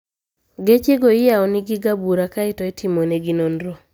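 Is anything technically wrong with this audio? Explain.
No, the speech signal shows no technical faults.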